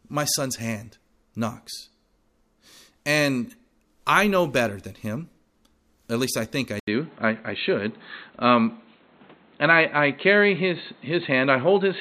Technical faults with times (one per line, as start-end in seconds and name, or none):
6.79-12.01 input switched to a poorer device